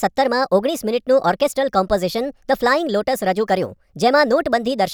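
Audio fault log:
throughout wrong sample rate: the speech is played out faster than it was captured, with no conversion. The ratio of 1.38 fits 32 kHz material played at 44.1 kHz. Speed and pitch rise together, so it sounds hurried and about 5.5 semitones too high.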